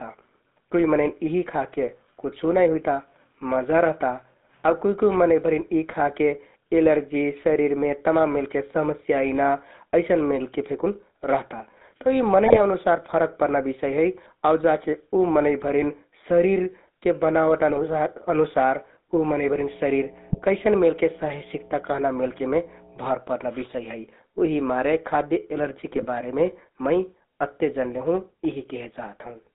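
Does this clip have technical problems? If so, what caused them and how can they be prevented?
Yes. The whole clip carries GSM full-rate codec damage, plainly audible. The speech sounds buzzy and gravelly, and the band is squeezed to roughly 200 Hz to 3.7 kHz. The coder rebuilds the voice from a vocal-tract filter fed by a coarse, regularly spaced pulse train, so fine detail in the excitation is lost. The roughness fits the 13 kbps full-rate scheme. To prevent it, route the call over a wideband or modern codec such as AMR-WB or EVS.

GSM bit errors break through in four short bursts: 12.46 to 12.60 s, 17.70 to 17.81 s, 20.30 to 20.41 s, and 25.95 to 26.06 s. Each lasts about a tenth of a second. The speech turns into squawks and gargling there. Corrupted bits reached the decoder and scrambled the filter, pitch and gain values for a handful of frames. Better radio coverage or stronger error protection and bad-frame concealment would prevent these bursts.

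Mains hum appears from 19.26 to 23.15 s. It is a steady low tone at 60 Hz, with some low harmonics. It is loud, close to the level of the speech itself. A ground loop or nearby transformer fed the power line into the signal path. It also overlaps the burst at 20.30 s. Breaking the ground loop, using balanced or isolated connections, and keeping cables away from transformers would prevent it.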